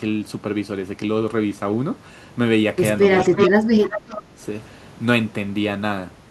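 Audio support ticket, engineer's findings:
Echo leak, 3.18–3.5 s and 3.83–4.22 s: delayed copy of the speech trailing by 364 ms, first burst about as loud as the original, second noticeably quieter. Likely the far end's echo canceller failing to remove loudspeaker pickup from its microphone.

Speech suppressed in double talk, 3.24–4.41 s: talker's speech dips and breaks up in pieces, roughly a second in total, deepest cut around 25 dB, overlapping the echo bursts. Likely the echo canceller unable to separate talker from echo, attenuating both.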